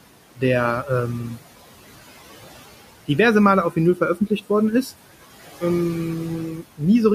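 A speech recording carries noise suppressor artifacts throughout: the room noise, which sits about 17 dB below the speech, is pulled down by about 16 dB in the gaps and swells back under each phrase. Between 3.96 and 4.5 s there is speech cut by the noise suppressor, where the processing mistook quiet parts of the speech for background noise and attenuated them along with it. The deepest drop is about 11 dB, and the affected fragments add up to roughly a tenth of a second, so those parts sound swallowed and faint.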